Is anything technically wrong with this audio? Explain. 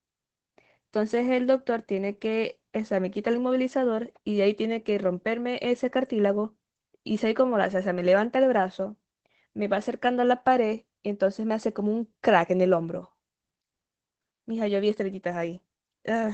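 Yes. Throughout the speech there is Opus voice compression: the SILK coder limits the band to about 8 kHz and models the voice coarsely, consistent with roughly 12 kbps, leaving it muffled, hoarse and faintly robotic. Unlike simple low-pass filtering, the voice itself is roughened.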